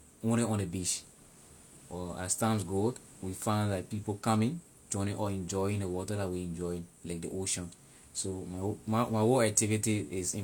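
Throughout the speech, compression artefacts persist and nothing is present above 18.5 kHz. The likely cause is low-bitrate audio saved at a high bitrate: an encode consistent with about 40 kbit/s HE-AAC was re-encoded as high-bitrate MP3, which cannot restore what was discarded.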